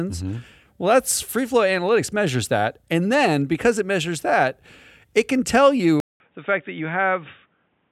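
An input switched to a poorer device at 6.00 s, with a 200 ms silence at the switch. From there to the end, nothing passes above 3.8 kHz, the speech turns dull and boxy and about 5 dB quieter, and a new noise floor appears, likely from a narrower-band microphone taking over.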